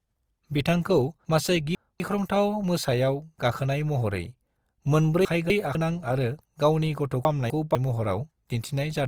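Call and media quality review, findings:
Grainy, rough texture on the speech for the whole clip, with noisy fill where detail should be but full bandwidth kept. Likely Opus compression in music (CELT) mode. Band energy held, starved bands filled with noise. Fits a low rate around 24 kbps.

Chunks out of order at 1.25–2.0 s, 5.25–5.75 s and 7.25–7.75 s. Jumbled speech with hard joins. Quarter-second blocks played late, two places behind at 1.25 s, one place at the others. Reordering in buffering or writing.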